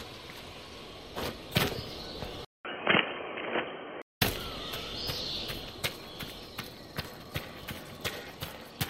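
At 2.45 s a short gap of about 200 ms opens, then the sound turns dull and boxy, a few decibels different in level over a fresh, faint noise floor, until 4.22 s; the likely cause is an input switched to a poorer device. The spectrogram shows everything above 3.2 kHz gone.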